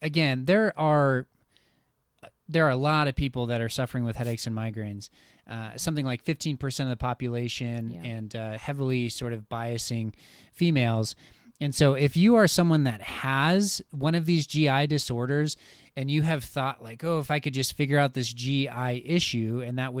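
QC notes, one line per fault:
4.21–4.35 s: wireless microphone noise hit, a short burst of static after "that are suffering with", as the radio link fades and receiver noise covers the speech before "and migraines".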